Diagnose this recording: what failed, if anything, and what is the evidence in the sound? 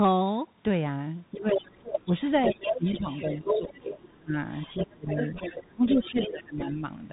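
The codec stage shows up first: the Bluetooth CVSD headset codec is audible throughout. Nothing gets through above 3.8 kHz, s sounds come out scratchy and a grainy hiss sits under the speech. That fits a 64 kbps one-bit delta link whose adaptive step can't keep up.

Call processing is next, with the other side's voice leaking through. From 1.33 to 3.93 s it sits only a few dB under the talker, and from 4.5 to 6.72 s it comes back somewhat quieter. The likely cause is far-end loudspeaker playback that the echo canceller didn't fully remove.

The same stage also causes speech suppressed in double talk. The talker dips at 1.36 to 1.67 s, 2.05 to 2.14 s, 2.5 to 3.08 s, 3.43 to 4.35 s, 4.82 to 5.09 s and 5.73 to 6.83 s, by up to around 25 dB, all within or right beside the leak. The canceller likely couldn't separate the two voices and turned both down.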